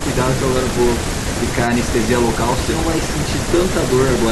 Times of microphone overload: none

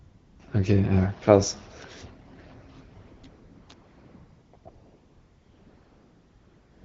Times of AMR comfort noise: 0.00-0.39, 3.01-6.84

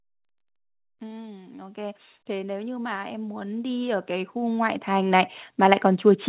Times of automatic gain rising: 1.30-5.87

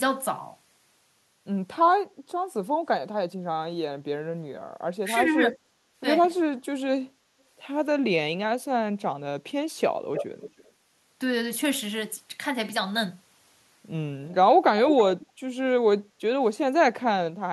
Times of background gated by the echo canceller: 16.07-16.19

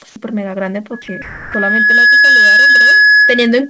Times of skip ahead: none

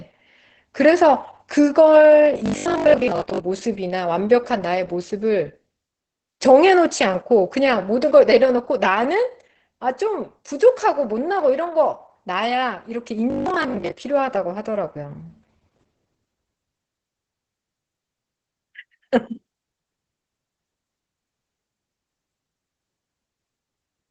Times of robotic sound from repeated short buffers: 2.24-3.40, 13.30-13.92

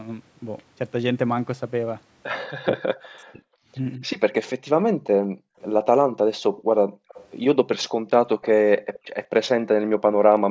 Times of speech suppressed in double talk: 2.64-4.04

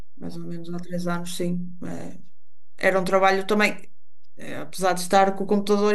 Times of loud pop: none

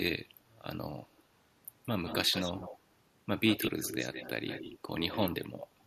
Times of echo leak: 1.83-2.79, 3.46-5.34

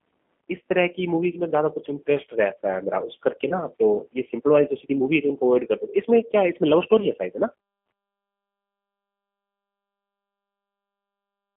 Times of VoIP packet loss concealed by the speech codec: 3.49-3.63, 7.00-7.07

